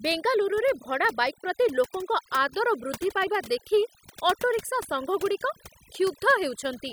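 Overdone noise removal runs through the whole of the speech, from start to finish. A noise reduction stage set far too aggressively is cutting individual frequency bands hard whenever their level sits close to its noise estimate, and the softer components of the speech fall below that threshold and vanish along with the noise. Between phrases the background collapses into near silence sprinkled with twinkling specks.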